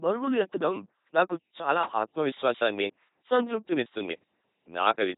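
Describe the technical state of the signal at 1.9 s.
At 1.9 s the speech is LPC-10 vocoded, as throughout. Each moment is synthesised as pure buzz or hiss, giving a mechanical robot voice, empty above 3.8 kHz, consistent with 2.4 kbit/s.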